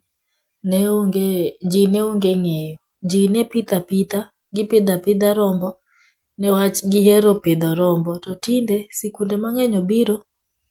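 No technical faults are audible.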